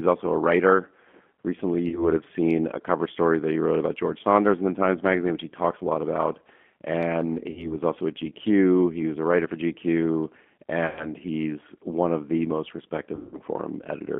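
Throughout, the speech carries plainly audible G.729 codec damage. The line is confined to roughly 200 Hz to 3.4 kHz, and the 8 kbit/s model-based coding sounds rough and synthetic.

At 1.88 to 2.09 s there is VoIP packet loss concealed by the speech codec. About 40 ms of audio is missing. The decoder extends the last pitch and filter with falling gain to fill the gap. Similar gaps follow at 7.51 to 7.74 s, about 60 ms, just before "also at", and at 10.87 to 11.12 s, about 100 ms, just before "he's one of the". The longest comes at 13.15 to 13.40 s, about 180 ms, right after "one of the most". Each time the sound stays weak or distorted briefly after the gap.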